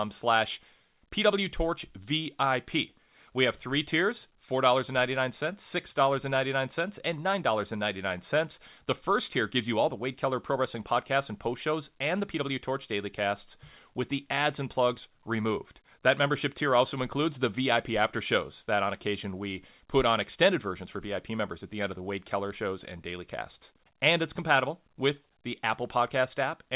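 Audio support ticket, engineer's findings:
No faults found; the speech carries nothing above 4 kHz, consistent with a narrowband WebRTC call path whose band limit and coding character point to G.711 A-law at 64 kbps, with the jitter buffer working normally.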